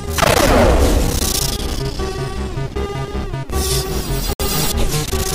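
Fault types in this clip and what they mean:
Bluetooth stall: at 4.33 s the sound drops to silence for about 66 ms and then resumes, most likely because the wireless buffer ran dry waiting on delayed packets.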